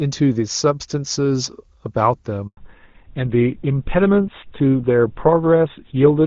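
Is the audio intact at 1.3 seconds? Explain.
Yes, at 1.3 seconds the speech is intact, carried by the AMR wideband (HD Voice) codec at 23.85 kbit/s, a rate high enough that any coding roughness there is faint at most.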